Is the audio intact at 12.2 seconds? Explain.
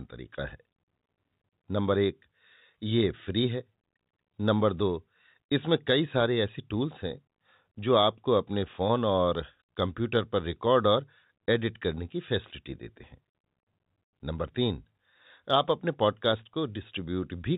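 Yes, the speech at 12.2 seconds comes through intact, with nothing breaking into it beyond the narrow, telephone-band sound of its G.711 coding.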